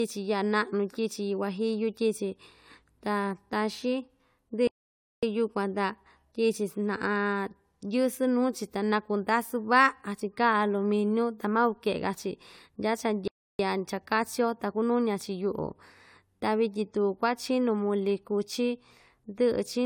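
Throughout the speech, the sound has a swirly, smeared, hollow character, and consonant attacks blur, even though content reaches up to 20 kHz. This is generation loss, likely from AAC-LC encoding at 96 kbit/s repeated about three times, each pass adding fresh quantisation noise.

At 4.67 s the audio cuts to silence for about 0.55 s, returning at 5.23 s, and again at 13.28 s for about 0.32 s until 13.59 s. These are playback stalls, likely where the player ran short of data or was blocked before output resumed.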